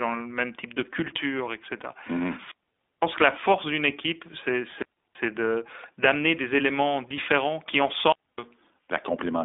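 iLBC codec throughout: the speech is confined to roughly 250 Hz to 3.6 kHz and sounds rough and synthetic, coded in independent 20 ms frames, which fits the 15.2 kbps mode.

Wireless microphone squelch dropout at 2.31 to 3.05 s, just before "que la force d'une". The radio signal fades, hiss swells, then the receiver's squelch mutes the output for about 0.51 s before speech returns. The same dropout recurs at 4.67 to 5.15 s, right after "la force d'une équipe", with a mute of about 0.33 s. It happens again at 7.99 to 8.38 s, after "des éléments différents qui", with a mute of about 0.26 s.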